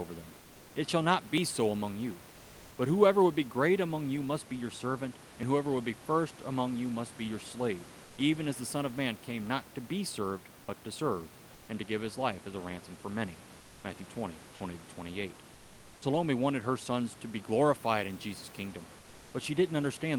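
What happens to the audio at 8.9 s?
Nothing goes wrong at 8.9 s: the speech there is intact, carried through the Opus call path as usual, with the room's background noise sitting about 23 dB below it.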